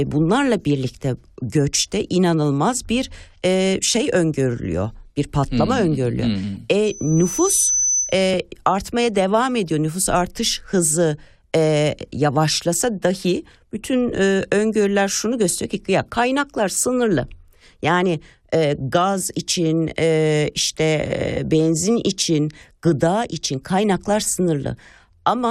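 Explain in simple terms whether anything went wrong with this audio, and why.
A piercing high whistle, around 6 kHz, swells up over most of a second at 6.85 s, reaching about the loudness of the speech and stopping at 8.23 s. This is loudspeaker feedback squeal: the microphone caught its own loudspeaker, and that one pitch kept feeding itself louder.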